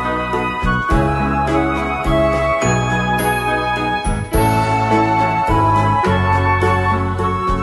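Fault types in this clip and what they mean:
No faults detected.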